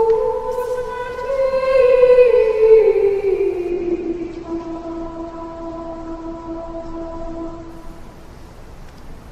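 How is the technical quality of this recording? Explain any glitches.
The recording has one clear glitch: a stretch where the audio quality drops. From 3.70 to 7.70 s, the adaptive stream falls to a lower bitrate. The connection slowed, so the player switched to a leaner version of the stream. The sound points to a drop from about 64 kbit/s Opus to about 12 kbit/s. Nothing above 8.1 kHz survives, so the treble goes dull. Codec artefacts rise. The change is abrupt, with no gap in playback.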